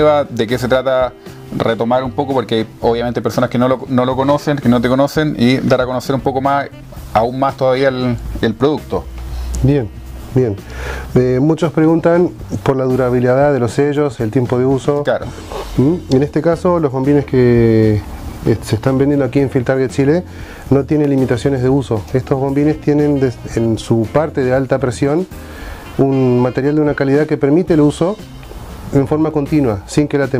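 Dropped samples at 21.05 s, 27.98 s and 29.31 s: each is a single sharp click, a thin vertical streak across the spectrum. The likely cause is a tiny gap in the stream, a fraction of a millisecond, that makes the waveform jump abruptly to a later value.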